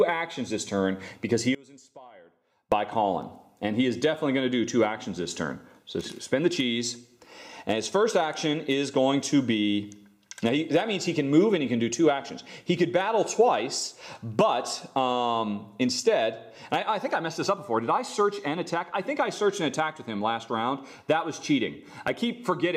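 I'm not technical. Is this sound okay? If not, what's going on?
No. From 1.55 to 2.72 seconds, one stereo channel was likely flipped upside down (one channel inverted), so when both sides combine, shared sound cancels and nearly disappears.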